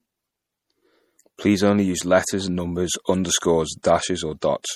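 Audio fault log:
Throughout: low-bitrate audio saved at a high bitrate. The speech has the artefacts of a heavy MP3 encode near 48 kbit/s, likely later re-saved as high-bitrate MP3. That second pass cannot restore lost detail, and nothing sits above 19.6 kHz.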